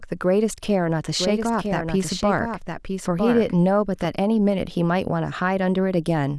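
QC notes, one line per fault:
1.19 to 4.05 s, doubled audio track: a second copy of the speech trails about a second behind, a bit quieter, clean and dry, likely a second capture path.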